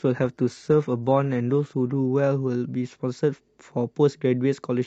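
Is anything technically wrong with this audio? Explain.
Yes. From 0.0 to 2.0 s it's an adaptive stream starting at a low bitrate. The player grabs a cheap rendition to start quickly, so the speech has thin, synthetic treble, which fits HE-AAC at 20 kbit/s. At 2.0 s it jumps cleanly, with no gap, to fuller sound suggesting AAC-LC at 96 kbit/s.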